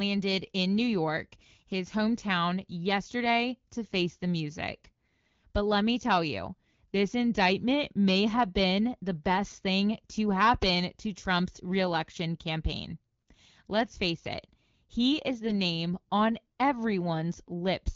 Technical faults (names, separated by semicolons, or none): AMR bit errors